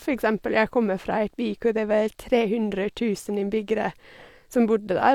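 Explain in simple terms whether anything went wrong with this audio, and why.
Nothing went wrong with this audio; there are no faults to explain.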